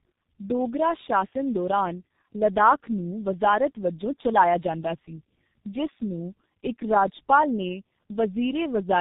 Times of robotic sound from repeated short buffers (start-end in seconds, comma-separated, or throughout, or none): none